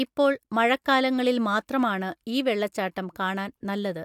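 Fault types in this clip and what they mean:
No technical faults are audible in this recording.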